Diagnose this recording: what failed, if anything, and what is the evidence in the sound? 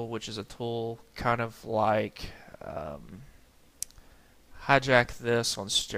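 A compressed frame was skipped at the codec stage, either missing from the stream or rejected by the decoder as damaged. At 1.68 s the audio jumps ahead by roughly one frame, about 20 ms.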